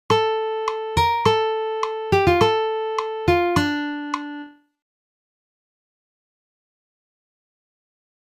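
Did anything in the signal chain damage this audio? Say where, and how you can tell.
No, nothing along the chain seems to have harmed this one; it comes through intact with no sign of trouble at any stage.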